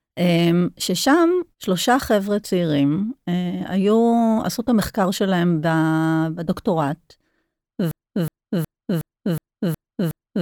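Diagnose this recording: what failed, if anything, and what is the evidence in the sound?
Playback or stream buffer likely stalled, giving a broken-record loop: from 7.91 s to the end, one 0.37 s fragment repeats seven times, replacing the remaining audio.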